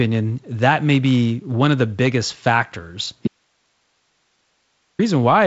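At 3.28 s, just after "of the biggest factors", the wanted signal was likely lost while the path after the break stayed live: an audio dropout to a faint residue. The speech cuts off abruptly, leaving about 1.7 s of hiss roughly 50 dB down until 4.99 s.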